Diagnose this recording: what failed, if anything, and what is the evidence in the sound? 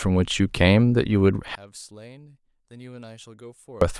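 From 1.55 to 3.81 s the speech collapses by about 28 dB to a faint residue, likely one channel inverted in analogue wiring, cancelling the centred voice when summed to mono.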